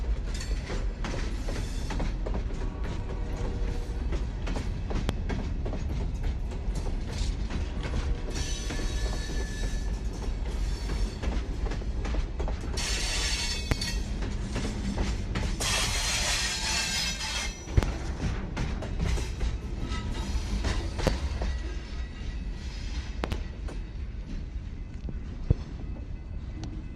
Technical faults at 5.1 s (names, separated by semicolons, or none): loud pop